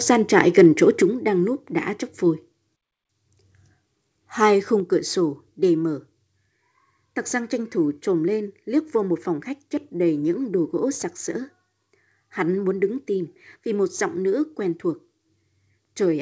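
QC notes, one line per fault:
0.38–0.66 s, microphone overload: the loudest syllables take on a harsh, crackling edge as peaks are flattened, likely from input gain driven past converter full scale.
1.02 s, microphone volume stepped down: level drops abruptly by about 5 dB just before "đang núp đã chóc", likely the call software cutting input gain after the preceding distortion.
4.8 s, microphone volume stepped down: a second sudden drop of about 4 dB in both speech and background, consistent with another automatic input-gain reduction.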